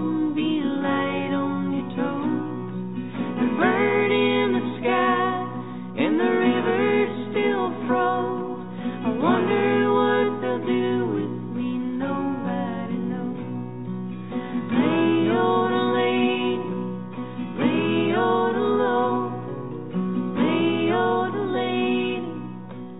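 No technical faults can be heard in this audio, which arrives over a call path that carries nothing above 4 kHz.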